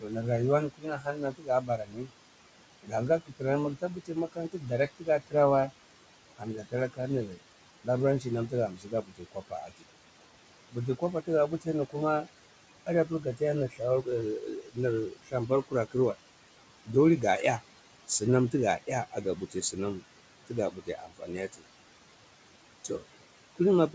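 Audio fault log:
throughout: noise suppressor artifacts. Steady room noise is pulled down by about 17 dB between phrases and swells back under speech, unlike a gate's clean on-off.
0.00–2.12, 2.83–5.71, 6.38–9.86, 10.71–12.27, 12.86–16.16, 17.60–21.63 s: speech cut by the noise suppressor. Soft consonants and word endings, up to about a second per stretch, drop by about 16 to 18 dB because they are mistaken for noise. They sound swallowed rather than masked by the background, which sits about 15 dB below speech.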